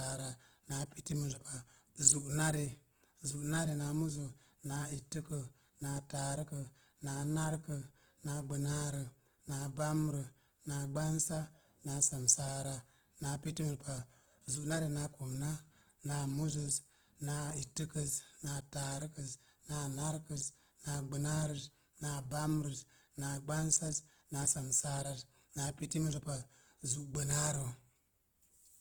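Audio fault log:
throughout, Opus compression: the speech has a rough, grainy, noisy texture, though it still reaches up to about 20.1 kHz, so the bandwidth hasn't narrowed. That likely comes from Opus in its music mode at a low rate, around 16 kbps, filling starved bands with folded or noise energy.
19.47 s, audio missing between chunks: a tiny skip where a sliver of sound, roughly 15 ms, vanishes and the two sides butt straight together with no silence. It's likely the recorder dropping a piece at a chunk boundary, which fits 5-second chunks.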